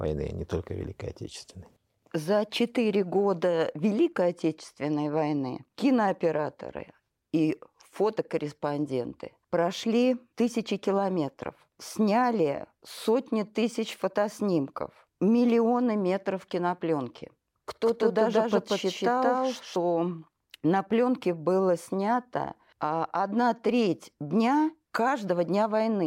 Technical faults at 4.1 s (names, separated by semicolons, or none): none